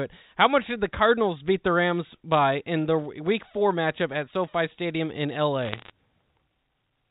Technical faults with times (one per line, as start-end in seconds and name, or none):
5.63-5.90 bit errors on a digital phone line